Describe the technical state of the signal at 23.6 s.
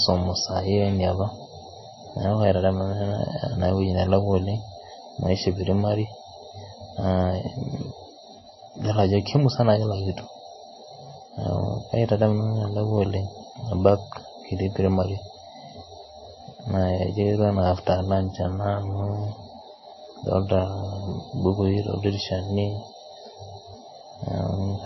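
Likely MP3 compression at a starved bitrate, consistent with about 24 kbps, runs through the whole clip: the treble stops at 5.8 kHz, and weak components flicker, leaving the speech watery and swirly.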